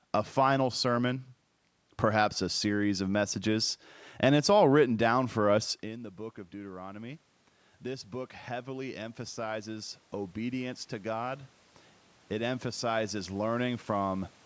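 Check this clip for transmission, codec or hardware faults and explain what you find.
One fault stands out: automatic gain rising, from 7.83 s to 11.45 s. The input level drops by about 16 dB. The automatic gain control reads this as a quiet source and slowly lifts its gain, by about 6 dB in total. The rise takes over three seconds, not an instant. Speech and room noise swell together across that stretch. The background climbs along with the voice. The talker's shift away from the microphone around five and a half seconds is ordinary movement.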